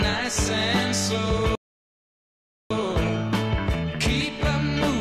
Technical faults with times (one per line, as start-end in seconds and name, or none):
1.55-2.70 playback stall